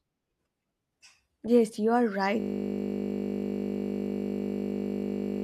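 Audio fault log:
2.40 s to end: system hang loop after "you are"; a frozen driver replays one 20 ms buffer, giving a steady 50 Hz buzz with identical repeating waveform cycles and evenly spaced 50 Hz spectral lines.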